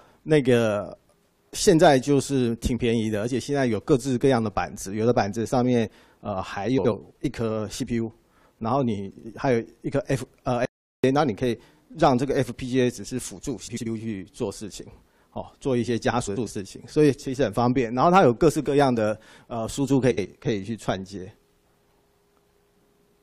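The audio carries two faults. Frames out of order occur at 6.78, 9.10, 13.67, 16.27 and 20.11 s. Each is a short garbled flutter where two adjacent blocks play swapped. Three are about 0.15 s long with 70 ms halves, consistent with three-frame runs. Two are about 0.2 s long with 93 ms halves, consistent with four-frame runs. No time is lost. An audio dropout to silence runs from 10.65 to 11.04 s. For 0.38 s the sound cuts to silence with no room tone, and the material in that gap is gone. The likely cause is a brief loss of the input signal while recording continued.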